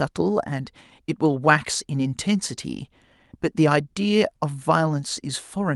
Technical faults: none

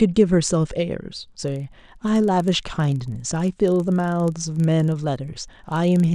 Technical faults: filter restarted on every block

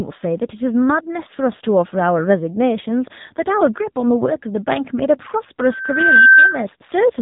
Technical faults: AMR narrowband mobile codec; loudspeaker feedback squeal

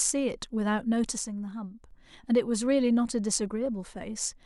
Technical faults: one channel drops out

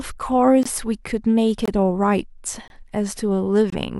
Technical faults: gap between chunks

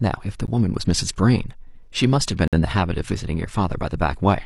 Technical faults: gap between stream segments

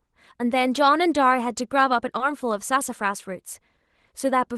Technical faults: short concealed packet loss

